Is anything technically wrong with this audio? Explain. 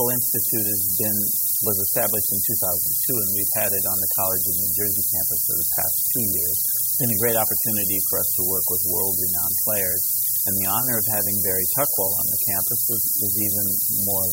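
Yes. The clip has low bit depth with noise shaping, present throughout. The sound is held to about 3 bits, so each sample is rounded to very few levels. That rounding error is fed back and pushed up in frequency rather than left flat. The result is a steady, thin hiss that climbs toward the top of the band. It sits only about 15 dB below the signal, so it stays audible all the way through.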